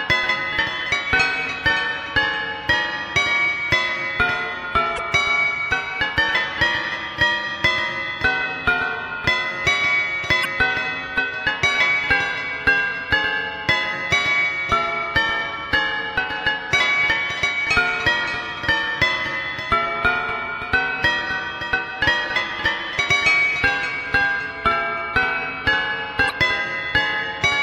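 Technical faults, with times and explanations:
4.95–5.00 s, 10.41–10.46 s and 26.27–26.31 s: damaged data in a compressed stream, three short blips where corrupted frames were misread and the decoder briefly lost sync.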